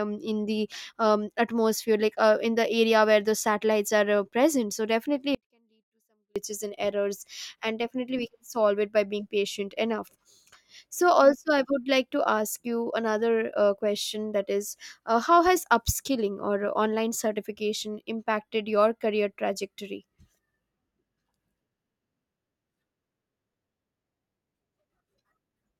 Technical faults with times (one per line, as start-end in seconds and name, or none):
5.35-6.36 audio dropout to a faint residue